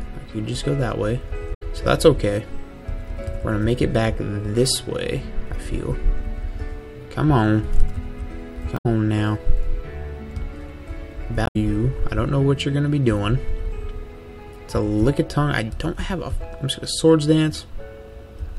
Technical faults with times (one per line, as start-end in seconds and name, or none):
1.50-1.63 damaged data in a compressed stream
8.74-8.86 damaged data in a compressed stream
11.43-11.56 damaged data in a compressed stream